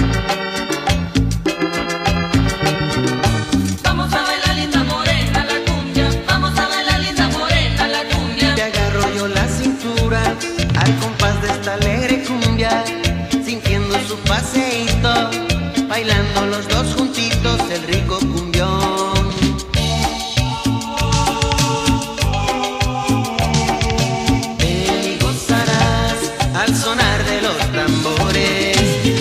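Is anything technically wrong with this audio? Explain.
No, nothing technically wrong can be heard here.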